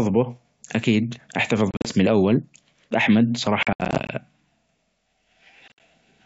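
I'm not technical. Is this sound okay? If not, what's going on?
No. The speech has packet loss on an ADPCM call: small chunks of sound go missing and leave sharp-edged gaps. This happens at 1.71 to 1.92 s, just before "أو القهوة", at 3.63 to 4.12 s, the worst stretch with about a quarter second lost in pieces, and at 5.68 to 5.80 s. Unlike a simple recording dropout, each gap is followed by slightly distorted speech for a moment, because the receiving end lost track and needs a few hundredths of a second to catch up.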